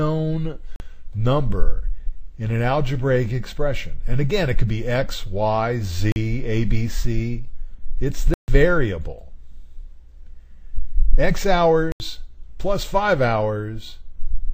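At 0.76 s, 6.12 s, 8.34 s and 11.92 s the audio drops out in a block of digital silence, lasting 40 ms, 40 ms, about 140 ms and 80 ms respectively. The sound stops and restarts with no fade, heard as short holes, the 8.34 s one longest. Either the output buffer went unfilled in time or a calculation produced invalid values. A waveform shows a flat line at each gap; a spectrogram shows blank vertical bands across all frequencies.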